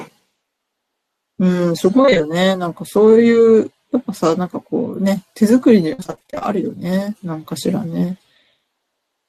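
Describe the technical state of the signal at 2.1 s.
Repeated packet loss (robotic sound) affects 2.01 to 2.21 s: short dropouts, the longest 23 ms, are patched by extending earlier sound across about half the span, giving choppy speech with pieces missing.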